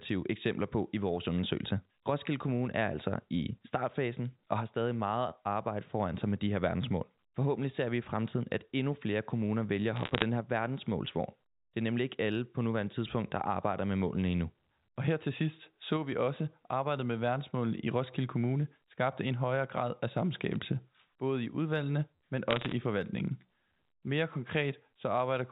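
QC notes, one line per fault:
9.96–10.22 s, bit errors on a digital phone line: a burst of sharp ticks and crackle after "flere kommuner vælger at", from single flipped bits each corrupting one sample.
20.52–20.56 s, bit errors on a digital phone line: a brief cluster of clicks after "en højere grad af", a light error rate, so just a few corrupted samples.
22.51–22.73 s, bit errors on a digital phone line: heavier crackle after "både i udvalgene men", roughly half a percent of bits flipped. Sign or high-bit hits in the 4 kHz-limited A-law stream give the loudest ticks.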